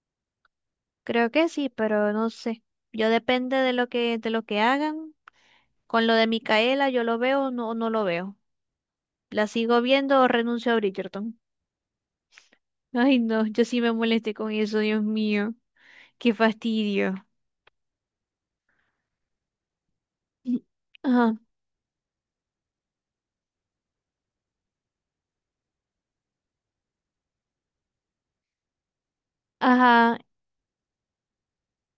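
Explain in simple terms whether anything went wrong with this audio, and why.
Nothing went wrong with this speech recording: no technical fault can be heard anywhere in it.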